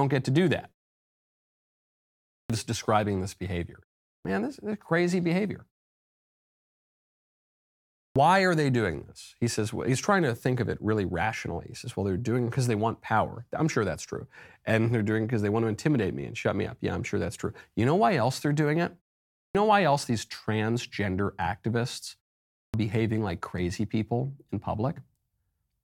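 Clipped start after a pause occurs at 2.39, 4.13, 8.03, 19.42 and 22.61 s. After each silence the output device is still waking, so 107 to 128 ms is lost. Speech snaps in abruptly, as before "describing this behavior", without its first sounds.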